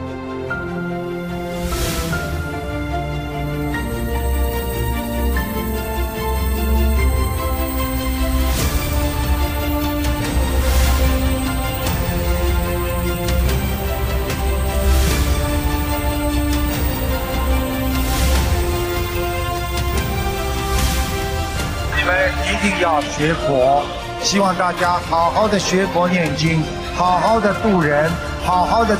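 No audible technical faults.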